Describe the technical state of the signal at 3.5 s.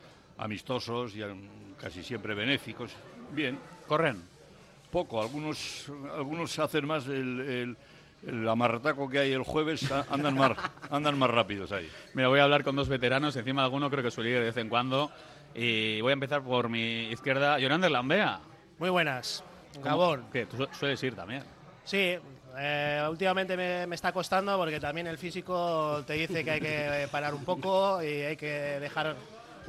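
At 3.5 s the signal runs without any audible fault, with no dropout, clipping, distortion or glitch at that moment.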